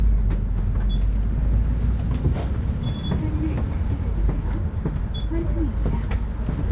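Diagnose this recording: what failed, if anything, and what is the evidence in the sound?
Nothing in the signal points to a failure at any stage of the chain: the sounds arrive continuous and intact, with no disturbance in level, timing or continuity.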